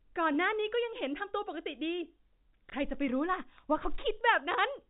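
At 2.70 to 2.73 s, packet loss with last packet repeated: one packet of about 30 ms went missing, and the receiver replayed the previous one in its place. Unlike a dropout, there is no silent gap, just a small blip, heard against the 4 kHz telephone band of the G.711 path.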